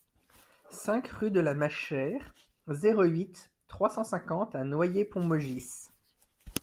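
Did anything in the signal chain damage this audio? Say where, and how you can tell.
No, nothing in the chain audibly damaged this speech, and no stage leaves a trace anywhere in the recording.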